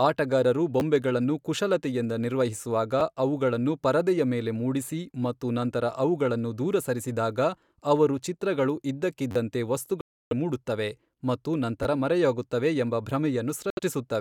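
At 0.80 s and 3.00 s, audio arrived late and the last block of about 11 ms, which fits a 512-sample buffer, replayed once. Each repeated buffer is heard as a click. From 9.31 to 9.36 s the same block repeats four extra times, making a brief buzz. From 10.01 to 10.33 s, a likely Bluetooth dropout lost packets, cutting the speech to a 0.3 s silence before it resumes further on. Another repeated buffer at 11.83 to 11.85 s plays the block twice more as a short stutter. A second likely dropout from 13.70 to 13.79 s leaves a 70 ms gap.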